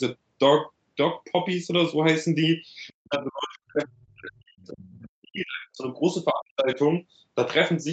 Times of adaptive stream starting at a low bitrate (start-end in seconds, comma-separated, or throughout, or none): none